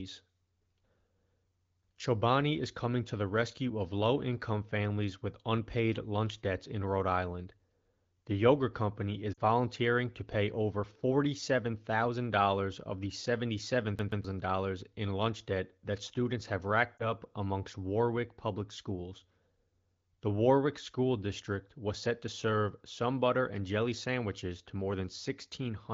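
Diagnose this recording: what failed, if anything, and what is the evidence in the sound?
Lost AMR speech frames, network/codec stage: at 9.34 to 9.40 s, just after "yogurt company is", about 40 ms of speech dips and warbles, which fits two concealed frames. At 16.97 to 17.09 s, after "debt that students have", a briefer glitch fits one lost frame. On a spectrogram the harmonics freeze and smear, then fade in energy before normal speech resumes.

CD stuck on one turn, storage/playback stage: from 13.99 to 14.24 s a 128 ms slice plays twice in a fast, even stutter. The waveform shows identical repeated blocks separated by tiny mute gaps, where the laser jumped back one track at the same point on the disc.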